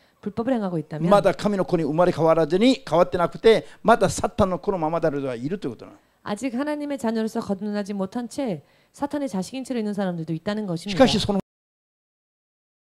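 The final buffers of the recording were never written out, a cut-off end, so the audio stops abruptly at 11.40 s in the middle of a sound. Instead of decaying naturally, it drops straight to digital silence, which fills the remaining 1.5 s or so of the clip.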